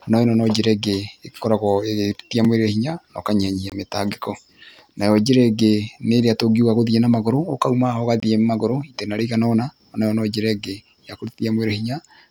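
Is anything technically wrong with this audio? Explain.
Yes. There are three blocks of digital silence in this speech. The audio drops to zero and back with no fade, likely because the output buffer wasn't filled in time. A 4 ms gap at 2.45 s, just after "njĩra ĩngĩ ĩkoragwo ĩgĩtia", sounds like a tick. A 23 ms hole at 3.70–3.72 s, after "mwĩrĩ hinya na ũkanyihanyihia", and another at 8.20–8.22 s are heard as short dropouts. Their matching length fits a 1024-sample buffer.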